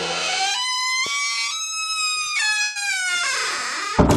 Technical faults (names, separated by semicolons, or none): burst of packet loss